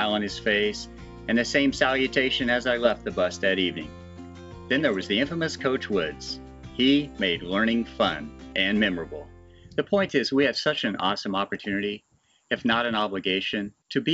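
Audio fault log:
No faults detected.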